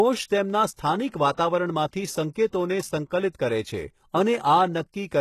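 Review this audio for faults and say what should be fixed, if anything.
Throughout the speech, the treble is rebuilt rather than carried. The likely cause is HE-AAC compression at a very low bitrate, consistent with about 16 kbps. Upper bands are copied up from below, so s sounds turn gritty and metallic, and nothing remains above 12.3 kHz. Encoding at a higher bitrate, or with a codec that codes the full band directly, would prevent it.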